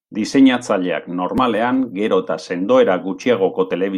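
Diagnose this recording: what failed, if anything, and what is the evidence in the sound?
Nothing failed at any stage between capture and playback; the speech carries no audible evidence of a fault.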